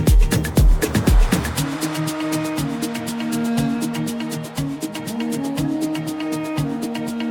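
No technical faults can be heard anywhere in this audio.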